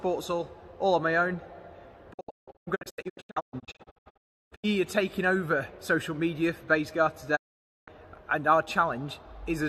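Digital broadcast dropout from 2.12 to 4.65 s, and again from 7.35 to 7.89 s: the receiver lost valid frames and muted until good ones returned. The first episode breaks into short holes, about 1.6 s lost in total, none longer than 0.34 s. The second loses about 0.5 s. Each cut fades out in 20 ms, and the missing audio never comes back.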